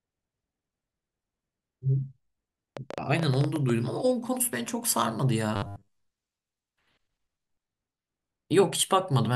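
A train of clicks runs from 2.77 to 3.71 s in this speech recording: around ten sharp pops at an uneven 10.8 per second, roughly 10 dB above the voice, likely from electrical interference or a faulty connection. Robotic sound from repeated short buffers follows from 5.56 to 5.96 s. A rigid 100 Hz metallic buzz replaces most of the audio, consistent with about 10 ms of sound being looped while incoming audio, likely arriving too seldom, is skipped.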